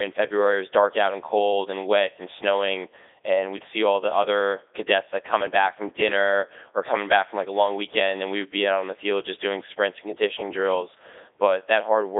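Speech that's been through a Codec 2 vocoder the whole way, and it sounds robotic and buzzy because the decoder rebuilds it from sine waves using pitch and envelope data. The heavy damage fits the 3.2 kbit/s mode, with a 300 Hz to 3.7 kHz band and nothing above 3.8 kHz.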